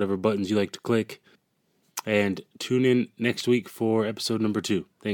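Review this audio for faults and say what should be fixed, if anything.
Nothing here needs fixing; no faults were found.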